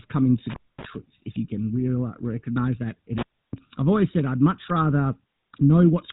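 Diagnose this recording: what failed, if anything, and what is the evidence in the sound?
The failure is at the codec stage. GSM full-rate codec damage runs through the whole speech clip as a plainly audible buzzy, gravelly roughness, with nothing above 3.8 kHz. The coder rebuilds a vocal-tract model from sparse, regularly spaced excitation pulses, which fits a 13 kbps full-rate stream.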